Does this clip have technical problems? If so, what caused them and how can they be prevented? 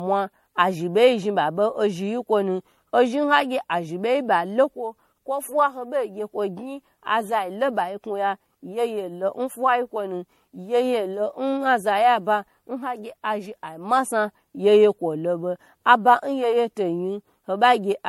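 Yes. Generation loss runs throughout this speech. It sounds swirly, hollow and smeared, with blurred attacks, likely from around seven rounds of MP3 re-encoding at what sounds like 64 kbit/s. A spectrogram shows patchy holes and nothing above 16.5 kHz. Keep a lossless master and encode only once.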